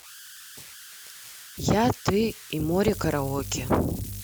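A speech clip carrying converter idle tones from start to finish: a whistle near 1.5 kHz sits in the pauses and turns grainy beneath quieter passages, about 19 dB below the speech. This points to an undithered delta-sigma converter cycling through repeating bit patterns on low-level input. From 2.93 s to the end, mains hum enters as a steady 50 Hz drone with low harmonics, roughly 15 dB under the speech, consistent with a ground loop or nearby transformer coupling the power line into the signal path.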